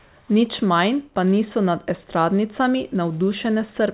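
No faults are audible in this speech clip.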